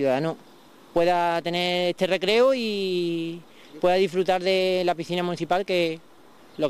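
No technical faults can be heard anywhere here.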